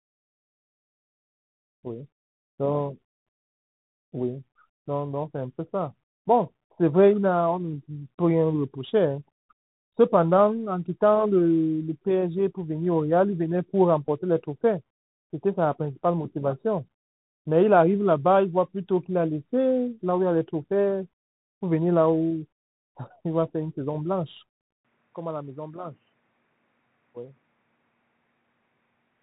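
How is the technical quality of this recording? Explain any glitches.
Pretty rough, honestly: the whole thing sits behind a narrowband headset codec, with one short dropout glitch in the middle and a drop in quality for the last few seconds.

The Bluetooth CVSD headset codec runs the whole way through, and the damage is plainly audible. CVSD sends just one up-or-down bit per sample with an adapting step, which fits a 64 kbps headset link. Everything above 4 kHz is gone, s sounds get scratchy when the step can't keep up, and there's a grainy hiss under the speech.

At 14.07 to 14.09 s there's a Bluetooth headset packet repeated glitch. About 11.2 ms of audio was lost, roughly three packets' worth, and the chip replayed the last good packet's bits. Each one repeats every 3.75 ms, so you get a brief buzzy blip near 267 Hz.

From 24.85 s to the end, the sound suddenly turns duller and boxier, with nothing above 3 kHz. 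The level drops by around 10 dB and a faint new noise floor comes in well below the speech, with no gap at the change. That's likely the input switched to a poorer device mid-recording.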